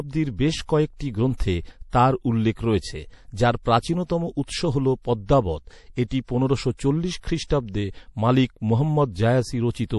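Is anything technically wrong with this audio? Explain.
Yes. Throughout, the speech sounds watery and swirly, with nothing above 11.5 kHz; this is likely MP3 compression, whose encoder drops treble and flickering weak components, which fits a low bitrate around 48 kbps.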